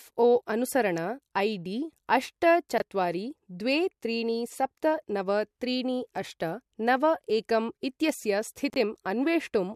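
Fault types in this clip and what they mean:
Chunks out of order: at 2.78 s after "डी अष्ट" and 8.7 s after "अष्ट नव एकं इत्यस्य", a 20 ms slice of speech plays one or two slices late, giving a jumbled blip. Unlike a dropout, nothing is missing.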